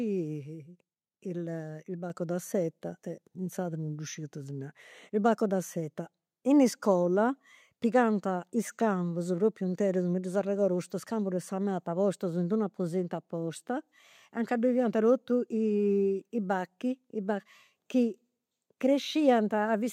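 At 2.1 s the microphone volume steps up by about 5 dB in one jump, as the call software boosts a too-quiet input, lifting speech and background together.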